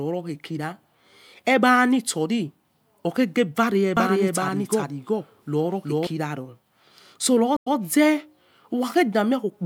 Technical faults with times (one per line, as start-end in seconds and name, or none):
3.97-6.07 doubled audio track
7.57-7.76 stream reconnect